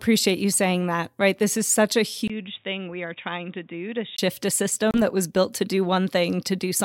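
At 2.28 s, just after "is such a", a 20 ms silence gives way to dull, boxy speech with nothing above 3.8 kHz. It is about 10 dB quieter, over a new noise floor roughly 40 dB down, until 4.18 s. This is likely an input switched to a poorer device.

From 4.91 to 4.99 s, just before "that was built to", the audio cuts to silence and then resumes slightly further along, as though it had played on unheard. This is likely a Bluetooth dropout: packets arrived too late and were discarded, consistent with about two lost frames.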